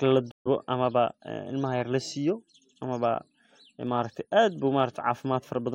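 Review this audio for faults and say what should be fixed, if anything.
Stream reconnect at 0.31 to 0.47 s: the connection dropped, leaving about 140 ms of silence in the speech, and the player restarted its decoder mid-stream, so the speech resumes about 70 ms further on than where it stopped. A larger jitter buffer with automatic session resume would prevent this.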